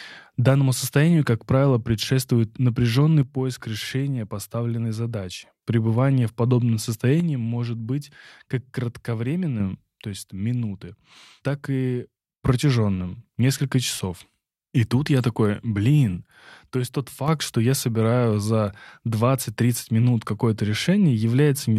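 Speech with four abrupt level drops of about 6 dB, at 3.23–5.63 s after "как правило предшествует напряженный", 7.20–9.60 s after "в подобном", 10.04–12.44 s, and 16.27–17.28 s between "тут я такой блин" and "что я собираю за", likely one channel dropping out before the mono sum.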